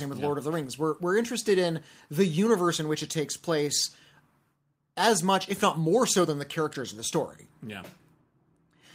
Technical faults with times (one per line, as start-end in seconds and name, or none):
none